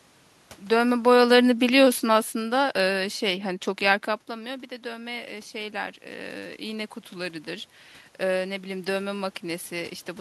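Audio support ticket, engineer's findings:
Automatic gain falling, 0.71 to 3.02 s. Level sinks about 11 dB over two seconds. Room noise sinks with the speech. Talker movement around half a second. AGC pulled its gain down gradually in response.

Automatic gain rising, 4.26 to 7.44 s. Speech and room noise swell together, about 7 dB over three seconds. Input had dropped about 13 dB after talker movement around 4 s. AGC raised its gain slowly to compensate.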